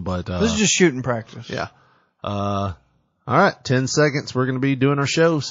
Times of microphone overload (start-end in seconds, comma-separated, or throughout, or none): none